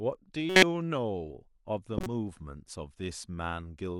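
Damaged compressed frames, a handful at a time, reached the decoder and were played as corrupt frame decoded events at 0.50–0.63 s and 1.93–2.07 s, misplacing energy as brief chirps, blips or noise bursts over the speech.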